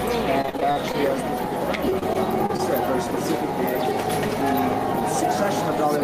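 Gain pumping runs throughout: the gain ducks by about 5 dB under each loud sound, likely from a fast limiter clamping excessive gain.

Repeated packet loss (robotic sound) hits from 0.41 to 0.96 s and again from 1.90 to 2.60 s. Gaps up to 42 ms are filled by stretching the last sound, roughly 30% and 13% of each span, giving choppy audio.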